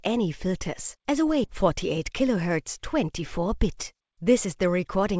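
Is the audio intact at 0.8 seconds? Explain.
Yes, the audio is intact at 0.8 seconds, with no dropout, glitch or distortion at that moment.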